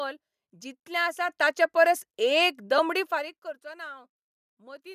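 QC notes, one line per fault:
1.29 s and 3.33 s, microphone volume stepped up: the input level jumps by about 7 dB at 1.29 s and by about 5 dB at 3.33 s, each in a single step with no ramp. Speech and background noise rise together, which points to automatic gain control raising the device's input volume rather than a change at the source. The second step lands inside the zipper-noise fade, briefly working against the downward level movement.
2.78 s, lost LE Audio frames: a very short dropout, consistent with one missing 7.5 ms frame. The decoder fills the gap by repeating the previous spectrum with randomised phase, so the speech briefly smears into a grainy, noise-like patch instead of falling silent. The slight breathy top end around it is likely from LC3 coding. Because the loss is a single frame, the concealment never reaches its fade-out stage.
2.99–3.58 s, zipper noise: the level falls by roughly 25 dB over about 0.6 s in discrete 2 dB steps, at around 30 steps per second, with no interpolation between them. 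Each abrupt gain change puts a small discontinuity in the waveform, heard as a rapid ticking or zipping that rides on the speech for the duration of the fade.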